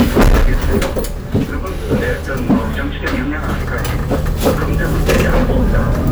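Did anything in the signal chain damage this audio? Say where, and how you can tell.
Yes: hard clipping at the converter throughout, overdriven about 18 dB and flattening roughly one sample in twenty. Loud sounds carry harsh fuzz, not soft saturation's rounded warmth.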